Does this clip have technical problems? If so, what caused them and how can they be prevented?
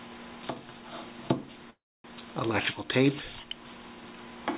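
Yes. A call audio freeze runs from 1.7 to 2.07 s. The sound stalls, the last moment is stretched into a brief fading buzz or hiss, and then about 0.27 s of silence follows before the audio picks up exactly where it stopped. That adds roughly 0.34 s of delay and loses nothing. The likely cause is packets held up in transit until the jitter buffer emptied. The band-limited sound, with nothing above 4 kHz, fits a G.711 call path. Prevention: give the call a steadier network path and a jitter buffer that adapts with enough headroom.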